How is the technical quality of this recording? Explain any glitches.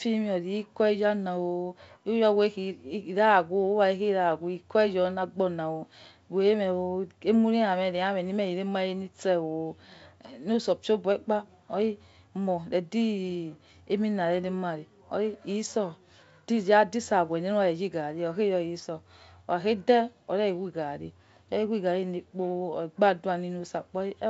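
No glitches can be heard: the speech comes through G.722 wideband telephone coding at 64 kbit/s, with its band ending near 7.7 kHz as that coding gives.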